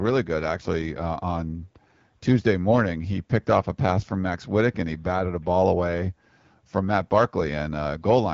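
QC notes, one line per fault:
No faults to note.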